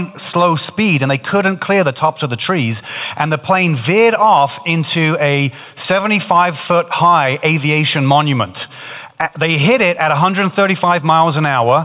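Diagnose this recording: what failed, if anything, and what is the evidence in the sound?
Nothing in this recording points to a failure at any stage of the chain. It has passed through a call path, and the band ends at 4 kHz with nothing above it, which fits a narrowband telephone codec such as G.711 A-law at 64 kbps working as intended.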